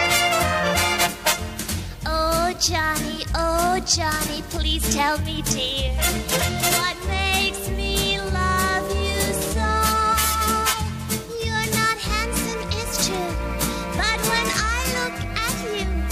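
No technical faults can be heard anywhere in the signal.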